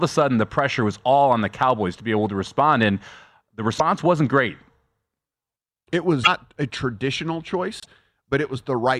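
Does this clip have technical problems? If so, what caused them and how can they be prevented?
Yes. A broken MP3 bit reservoir shows up three times: at 3.78 to 3.80 s, just before "wasn't great"; at 6.23 to 6.28 s, just before "a traditional"; and at 7.80 to 7.87 s, right after "a traditional". Each is a brief glitch where the speech skips ahead, lasting about one to three frames of roughly 26 ms. The likely cause is missing MP3 frames. The frame after each gap reaches back into the reservoir for data stored in earlier frames, finds bytes from the wrong frame, and decodes garbage until the stream realigns. To prevent this, transfer and store the MP3 intact, or cut it only at clean frame boundaries with a tool that rebuilds the reservoir, or re-encode from the source.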